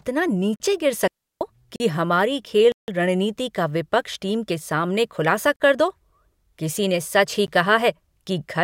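Speech with abrupt cuts to dead silence at 0.56, 1.76 and 5.56 s (40 ms each, the last just before "कर दो"), 2.72 s (160 ms, before "रणनीति का विपक्ष टीम") and a tick at 7.47 s between "किसी ने सच ही" and "कहा है". These are blocks of digital silence, where output buffers likely went unfilled. From 1.08 to 1.41 s there is a clean, noise-free hole of about 334 ms with soft edges, a digital wireless dropout where the receiver muted after losing too much data.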